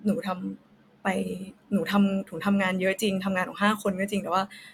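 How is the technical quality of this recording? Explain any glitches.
Listening closely to this speech recording, nothing stood out as a technical problem.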